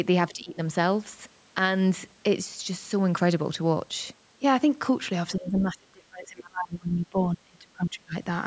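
From 0.31 to 0.58 s the speech dips by roughly 10 dB, then from 5.36 to 8.15 s it sinks far deeper, close to 30 dB, the likely result of speech suppressed in double talk as the echo canceller ducks the talker under far-end sound.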